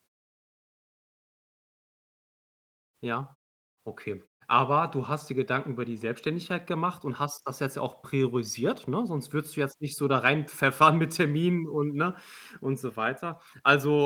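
No technical faults can be heard anywhere in the speech.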